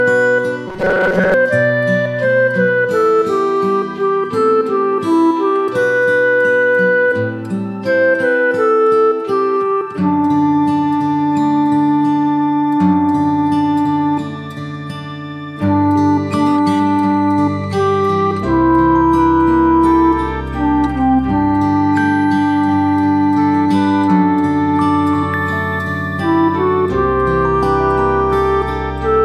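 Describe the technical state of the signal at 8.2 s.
At 8.2 s the signal is intact, with no dropout, distortion, glitch or other fault at that moment.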